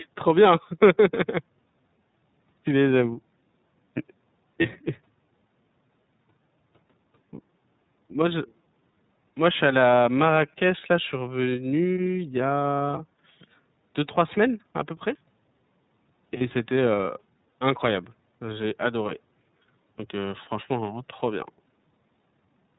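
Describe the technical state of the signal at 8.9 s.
From 8.91 to 8.94 s there is lost iLBC frames concealment, consistent with a single dropped 30 ms frame. The decoder repeats the last pitch cycle blended with noise, giving a brief held, slightly buzzy vowel. On a spectrogram the harmonics freeze into flat horizontal bands, and the waveform shows near-identical repeating periods. Normal sound resumes immediately afterward.

Underneath, the iLBC codec is plainly audible. Its coding points to a 13.33 kbps mode, and its narrowband limit leaves a spectrogram completely empty above 4 kHz. The sound is clear but slightly rough and synthetic.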